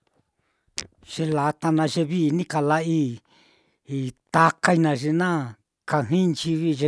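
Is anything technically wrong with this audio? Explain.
No, no technical faults here.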